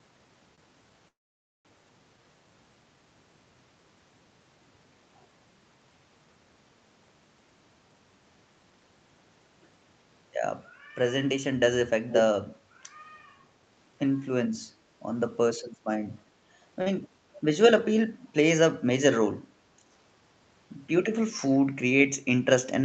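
A short stall from a late packet at 0.55 to 0.67 s: a packet missed its slot, the jitter buffer ran dry, and the receiver held the last sound for about 23 ms before resuming from the same point. It sounds like a brief smear, not a dropout.

A call audio freeze from 1.09 to 1.67 s, likely caused by packets held up in transit emptying the buffer. The sound is stretched into a fading buzz that sinks to near silence for about 530 ms, then continues where it stopped, inserting a gap of roughly 0.56 s.

An echo leak at 12.10 to 12.25 s: a delayed copy of the speech comes back, 361 ms behind and only about 5 dB below it. The likely cause is a far-end loudspeaker whose echo canceller let its microphone pickup through.

Another short stall from a late packet at 16.82 to 16.88 s holds the sound for about 43 ms, nearly twice as long a drag as the first.

A second echo leak at 17.33 to 17.42 s has the same 361 ms delay but sits about 25 dB down, so it is only a faint trace trailing the speech.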